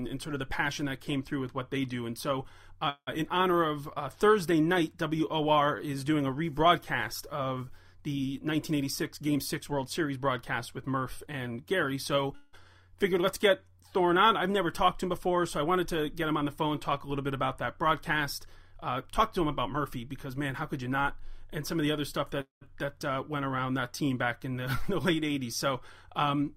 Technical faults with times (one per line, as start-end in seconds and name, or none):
2.89-3.09 call audio freeze
8.39-11.27 jitter buffer speed-up
12.35-12.55 call audio freeze
18.39-21.20 jitter buffer speed-up
22.41-22.63 call audio freeze